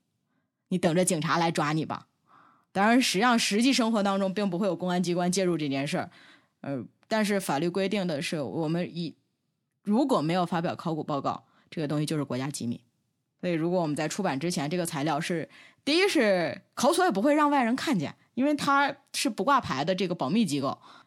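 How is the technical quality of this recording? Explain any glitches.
Technically the recording holds up well, with no glitches to explain anywhere in the signal.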